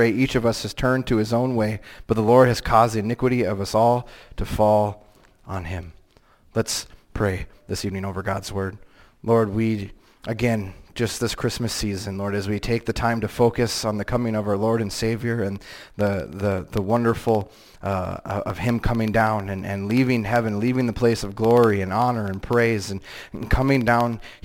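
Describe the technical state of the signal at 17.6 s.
At 17.6 s the signal has periodic USB or driver dropouts, running from 15.5 to 24.39 s. Every 64 ms a stall drops a sliver well under a millisecond, filled with silence, giving steady ticks over the signal. A spectrogram shows evenly spaced thin vertical broadband lines, and the waveform shows tiny flat gaps.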